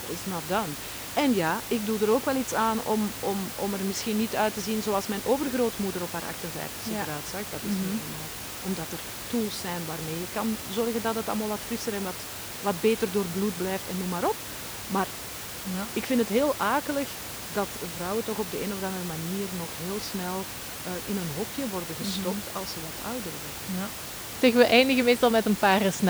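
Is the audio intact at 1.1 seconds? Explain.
Yes, the audio is intact at 1.1 seconds, with only the room's own background noise sitting about 10 dB below the speech.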